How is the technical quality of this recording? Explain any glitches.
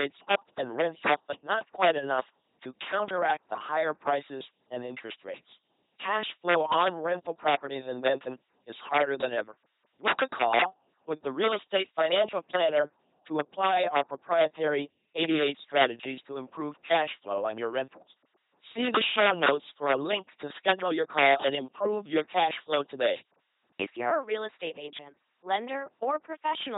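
Poor. The speech carries two faults from start to finish.

Integer overflow runs through the whole recording. The level sits about 5 dB past the integer limit. Nothing clamps those peaks, so they wrap to the opposite sign. Each one jumps across the full range in a single sample. Well under one percent of samples are affected. They land on the loudest moments. You hear hard, violent cracks there, far sharper than clipping would sound.

The LPC-10 vocoder also colours everything. It rebuilds each moment with a ten-pole tract filter. That filter is fed either a pulse train or noise, never a mix. The damage is heavy. The voice comes out buzzing and mechanical, like a robot. Wrong voicing calls add stray buzz or hiss. Nothing survives above 3.8 kHz, so the sound is dull and narrow. The coarseness fits a 2.4 kbit/s stream.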